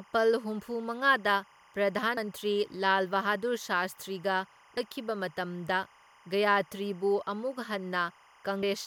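From the start and running the whole way through, timecode bleed sits behind the speech. A linear timecode signal at 25 frames per second has leaked in, its square wave flipping between tones near 1 kHz and 2 kHz around 30 dB down. Unlike a steady hum or whine, it is a continuous chirping warble.

At 2.16 s, 4.76 s and 8.62 s, damaged data in a compressed stream produces a brief glitch. Corrupt bytes make the decoder lose frame sync and jump to the next header. Each event is isolated and clipped short.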